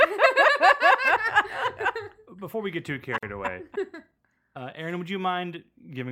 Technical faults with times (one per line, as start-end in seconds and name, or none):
3.18-3.23 gap at a join of encoded pieces